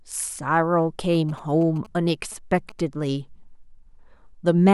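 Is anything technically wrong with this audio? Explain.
Yes, there's GSM signalling burst interference from about 1.14 to 3.04 s. A nearby 2G phone sending short radio bursts gets rectified by the audio circuitry, giving a galloping dit-dit-dit of brief 217 Hz buzzes, roughly 20 dB under the speech.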